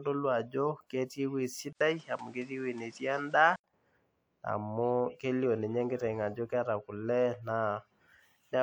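Speech, with the input likely switched to a poorer device from 1.73 to 3.64 s. An 80 ms silence marks the switch, then nothing above 9.8 kHz gets through, so the sound turns duller. Background noise sits roughly 30 dB below the signal while loudness stays about the same.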